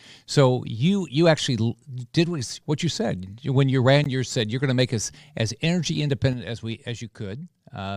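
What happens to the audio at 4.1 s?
Right after "said when you ran", at 4.04 s, the speech drops out for about 15 ms. This is a gap between stream segments. The time stamps of two adjacent segments do not meet, so the player fills the space with silence. The result is a short hole with hard edges, heard as an abrupt tick-like break. The timing fits segments of about 6 seconds. No audio is lost. The hole simply adds time.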